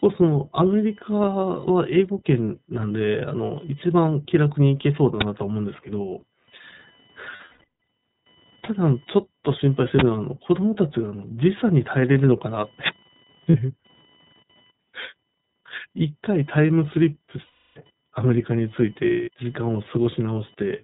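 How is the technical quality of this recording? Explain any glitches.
Technical quality is poor: the speech is clearly degraded by a low-bitrate codec and a faint electrical buzz, and it has two loud digital bursts and several dropouts.

Throughout, a faint buzzing whine with a pulse rate near 1 kHz sits about 35 dB below the speech. This is computer activity noise: processor or peripheral load currents disturbing the audio ground.

Throughout, the speech sounds narrowband, rough and slightly synthetic, with nothing above 4 kHz. This is the iLBC codec, which rebuilds each 20 ms frame independently and fits a rate near 15 kbps.

At 5.21 s, and again from 9.99 to 10.01 s, there are very loud, harsh digital bursts. These come from an uninitialised buffer, where stale memory was played as audio. The bursts fit blocks of 512 and 1024 samples.

From 7.36 to 7.64 s, 13.50 to 13.55 s, 17.46 to 17.79 s, and 19.08 to 19.30 s, the sound smears into a held, buzzy vowel before snapping back. 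These are lost iLBC frames, concealed by repeating the last pitch cycle. Across the affected stretches, 380, 40, 300 and 200 ms of audio are missing. The first stretch is broken into scattered gaps, the longest about 150 ms.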